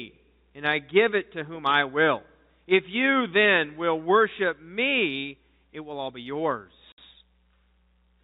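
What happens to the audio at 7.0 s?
Just before 7.0 s, from 6.92 to 6.98 s, the speech drops out for 60 ms: packet loss filled with silence. The gap fits three lost 20 ms packets, replaced by digital silence, so the gap has hard edges at each end.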